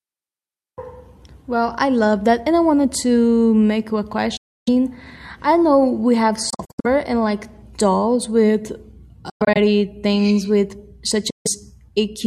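Bluetooth dropouts at 4.37, 6.50, 9.30 and 11.30 s, likely from wireless packets arriving late and being discarded. The speech cuts to silence after "to make you a" for about 0.3 s. At 6.5 s it stutters through short scattered gaps over 0.34 s. After "like dolls with" it breaks up over 0.26 s before "things with". After "things with" it drops out again for about 0.15 s. Each time the speech resumes further on, as if it had kept playing.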